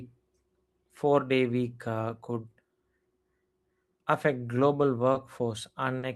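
At about 5.13 s, a packet of this speech arrived late and the jitter buffer ran dry, producing a short stall from a late packet. The receiver stretched the last sound for roughly 20 ms until the packet turned up, then continued where it left off, losing nothing but adding 20 ms of delay. A second stall follows at about 5.99 s, this time held for 40 ms, pushing the delay up by another 40 ms. Both are heard as a sound dragged slightly too long, with a faint buzz or dip.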